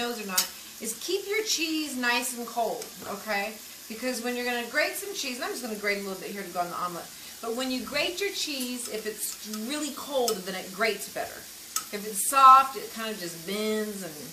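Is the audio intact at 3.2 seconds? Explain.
Yes, at 3.2 seconds the audio plays through without a dropout, click, glitch or any other audible fault.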